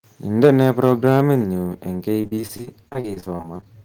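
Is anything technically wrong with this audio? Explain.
Yes. The recording has three distinct problems, all in the speech.

Microphone overload runs from 0.43 to 1.21 s. The loudest syllables have their waveform tops flattened, with peaks pushed about 5 dB past the converter's ceiling and roughly 2 percent of samples clipped. The likely cause is an input gain set too high, so the signal hits full scale and is cut off there. That squared-off shape adds a harsh, crackling grit to the louder stretches of the phrase.

Microphone volume stepped down twice, at 0.45 s by about 2 dB and at 1.44 s by about 3 dB. Each time, voice and room level drop abruptly rather than fading. The first step comes almost immediately after the distortion begins. That pattern points to the call software likely reacting to the overload by cutting the device's input gain in discrete steps, which leaves audible jumps in loudness.

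Repeated packet loss, heard as robotic sound, covers 2.21 to 3.67 s. The speech breaks up in a rapid series of short holes, the longest about 40 ms, with roughly a quarter of that span patched over. About 380 ms is missing, and around 359 ms of it is filled by stretching the preceding sound. The concealment repeats the last fragment each time, so the passage comes across as choppy, with pieces of the speech gone.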